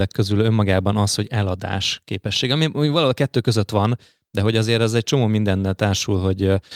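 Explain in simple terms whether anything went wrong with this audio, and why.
Nothing went wrong here; the speech has no audible faults.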